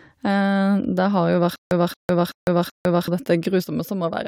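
A speech clip with a stutter with silent gaps from 1.56 to 3.08 s. The same 227 ms fragment returns four times, every 380 ms, separated by 153 ms of digital silence. This likely comes from a stalled stream replaying its last fragment, and the exact repetition sets it apart from random dropouts. From 3.64 s to the end, one channel drops out. The level falls abruptly by about 6 dB rather than fading, which points to a likely loss of one stereo channel in a mono sum.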